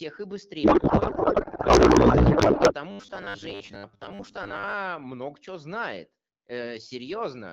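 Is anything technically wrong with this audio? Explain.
Yes, there are two faults in this speech recording.

From 0.63 to 2.74 s there is a codec payload misread. The AMR frames were packed octet-aligned but unpacked as bandwidth-efficient, so the decoder places every field at the wrong bit offset. The speech turns into garbled noise and warble that barely tracks it.

From 2.91 to 4.74 s, ending just before "много чего", there is robotic sound from repeated short buffers, likely caused by audio arriving too seldom. A roughly 10 ms segment is looped in place of about half the real audio, imposing a rigid 100 Hz metallic buzz that only loosely follows the speech.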